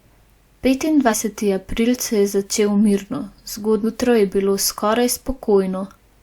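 Compressed frames skipped at 1.09 to 1.14 s, just before "april se", and again at 3.83 to 3.86 s, just before "je bilo". Whole blocks of the compressed speech never reach the output, so the audio leaps ahead. The first jump loses about a tenth of a second, which points to two frames of roughly 46.4 ms. The second drops around 300 ms, which points to several frames.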